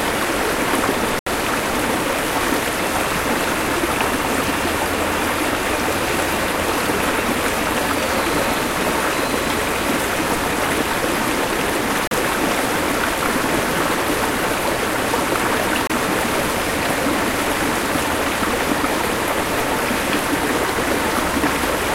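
At 1.19 s the sound cuts abruptly to silence for about 74 ms before resuming at 1.27 s. Shorter dropouts follow at 12.07 s (39 ms) and 15.87 s (27 ms). These are most likely Bluetooth stalls: radio interference held back packets, so the headphones' small playback buffer emptied and output paused until the retransmitted data arrived. The result is a clean gap rather than a click or a smear.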